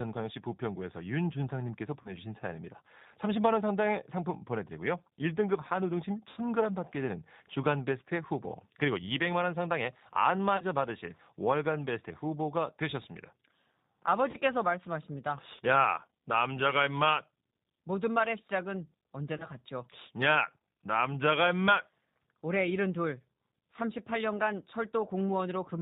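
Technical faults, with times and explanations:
throughout, G.729 codec: the speech sounds rough, slightly synthetic and dull with nothing above 4 kHz, which fits G.729A at 8 kbit/s rebuilding speech from filter, pitch and sparse pulses.
2.02–2.17, 6.31–6.38, 10.57–10.63, 14.31–14.36 and 19.37–19.46, VoIP packet loss concealed by the speech codec: brief buzzy or noisy, fading smears where 30 ms of audio vanished (60 ms at 6.31). The decoder extrapolated from its last pitch and filter, and the sound stays weak for a short while after each gap.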